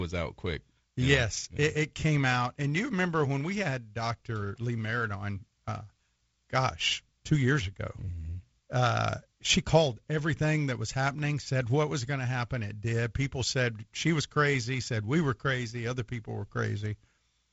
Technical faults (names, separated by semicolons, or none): none